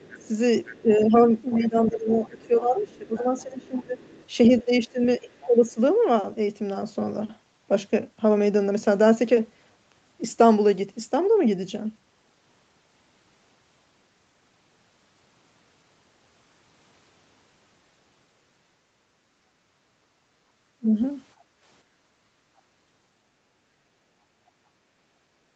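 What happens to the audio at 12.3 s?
Nothing goes wrong at 12.3 s: the speech carries on intact, with only the usual band limit of the call path, which leaves nothing above 8 kHz.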